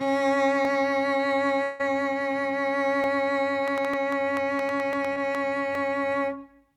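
A music clip with five single sharp clicks at 0.65, 3.04, 3.94, 4.93 and 5.75 s, likely dropped samples: each is a step jump in the waveform and a thin vertical line on a spectrogram. From 1.63 to 1.81 s the music turns to a fading buzzy continuation with no true silence, likely a long network dropout whose lost 160 ms was filled by concealment, visible as smeared, featureless bands. Between 3.68 and 5.36 s roughly ten similar pops arrive at an uneven pace of about six per second, peaking around 10 dB above the music, likely a train of clicks from interference, seen as repeated spikes. At 5.13 to 5.18 s a brief smear marks short concealed packet loss: 20 ms never arrived and was patched by extending the preceding sound, leaving blurred harmonics on a spectrogram.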